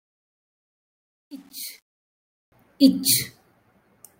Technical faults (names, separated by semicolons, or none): truncation distortion on a fade